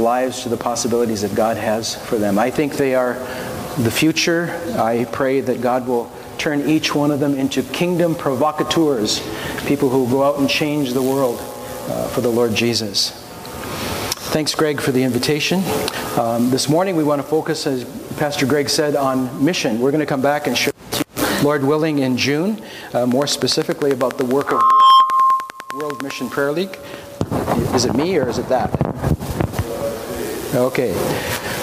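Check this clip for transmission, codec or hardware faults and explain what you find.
One hardware-type fault is audible: a train of clicks from 23.12 to 26.12 s. A steady ticking rides over the sound at a regular 10 clicks per second, about thirty in all, each sharp and much the same shape, and they jump out roughly 15 dB above the surrounding audio. The even spacing and identical pulses point to something periodic injecting energy into the signal path, likely electrical interference from nearby equipment or a faulty connection or power supply.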